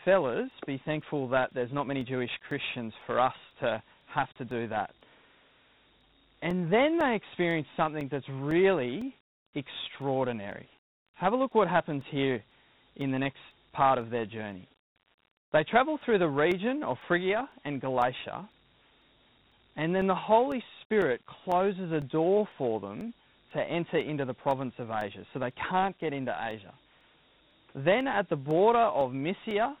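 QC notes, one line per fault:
Throughout: Dialogic VOX ADPCM, 4-bit adaptive coding leaves gritty hiss riding the speech and nothing above 3.9 kHz, which fits an 8 kHz, 32 kbps VOX file.
0.51 to 29.51 s: periodic USB or driver dropouts, brief gaps of about 2 ms filled with silence every 0.5 s give evenly spaced ticks, unlike random codec clicks.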